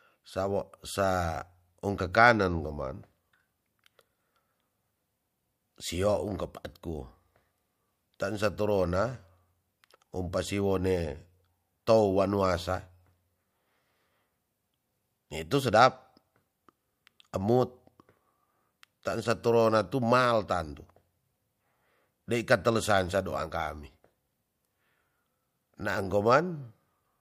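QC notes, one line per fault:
No fault found in this speech clip.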